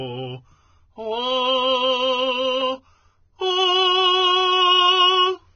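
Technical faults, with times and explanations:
Throughout, Vorbis compression: the music sounds hissy and grainy with blurred attacks and nothing above 6.5 kHz, likely from heavy low-bitrate coding near 15 kbps.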